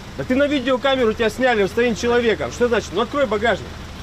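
The audio has a brief stutter from repeated frames at 0.62 to 0.65 s. One 23.2 ms stretch plays twice, which fits a single compressed frame, adding 23.2 ms.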